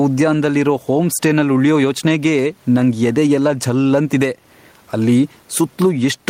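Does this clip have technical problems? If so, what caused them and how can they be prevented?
Yes. Gain pumping runs through the whole clip: the gain swings by about 10 dB, pulling down under every loud syllable, with the room noise otherwise about 42 dB below the speech. The likely cause is input gain set far too high, forcing a fast limiter to clamp down repeatedly. Setting the microphone gain lower, so peaks never reach the limiter, prevents it.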